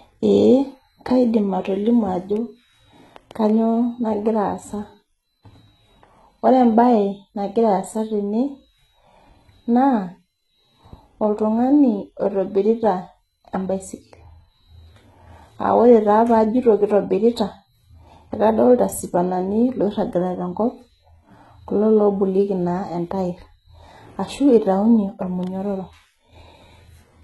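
HE-AAC compression, likely the cause, runs throughout the speech. Nothing sounds above 11.8 kHz, and the treble is rebuilt by copying lower bands upward, so it does not match the original. The s sounds come out gritty and lispy, with heavy damage that fits a bitrate around 16 kbps.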